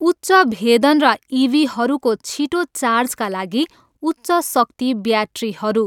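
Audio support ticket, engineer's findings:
Speech signal checked across the whole clip, with no dropouts, distortion or level problems heard, so no fault to log against it.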